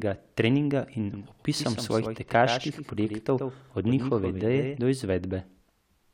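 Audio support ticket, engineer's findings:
Doubled audio track, 1.14 to 4.78 s. Speech repeated about a tenth of a second behind, somewhat quieter, full-band, no reverb tail. Likely a second capture path or misaligned duplicate in the edit. Waveform: offset echo envelope; spectrogram: smeared onsets, hard start/stop edges.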